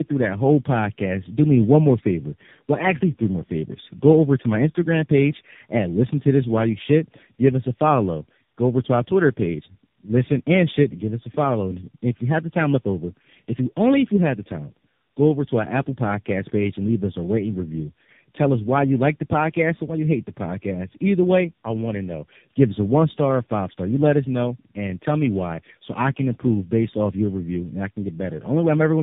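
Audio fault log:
Throughout, tandem speech coding: the speech sounds rough, muffled and warbly, with nothing above about 3.7 kHz. The call appears to have passed through three speech codecs in a row, AMR-NB at each end with a CVSD link between them, joined by G.711 mu-law hops. At each border the audio was decoded and coded again, so every coder worked on the previous one's already damaged output, and the errors piled up beyond what any one link would cause.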